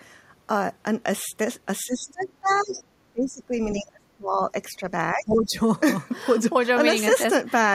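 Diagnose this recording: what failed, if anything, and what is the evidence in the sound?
Speech suppressed in double talk, at the call-processing stage: the voice dips by about 15 to 30 dB at 1.85–2.77, 3.13–3.52, 3.73–4.86 and 5.14–5.57 s. The likely cause is the echo canceller turning down the talker along with the loudspeaker echo.

The other side's voice is also leaking through at 2.08–2.25 and 2.49–2.84 s, about 30 dB and then 20 dB below the talker. That is likely loudspeaker echo the canceller didn't fully remove.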